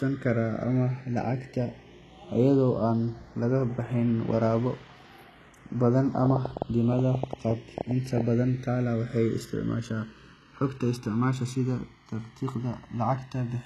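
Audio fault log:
throughout: channels drifting apart. The two channels run on clocks that disagree by roughly 150 ppm, so the delay between them creeps to about 1 ms by the end; summed to mono, comb notches sweep slowly through the spectrum, heard as a slow flanging over the speech.
throughout: HE-AAC compression. The audio was likely squeezed through HE-AAC at a low rate, about what 16 kbps gives. Treble is rebuilt from copied lower bands rather than coded, and nothing survives above 12.3 kHz, so s sounds come out gritty and plainly metallic.
6.26–8.22 s: train of clicks. A burst of pulses, likely interference or a faulty connection, injects about fifteen similar clicks at roughly 8.2 per second with uneven spacing. They peak around 15 dB above the speech, heard as irregular popping.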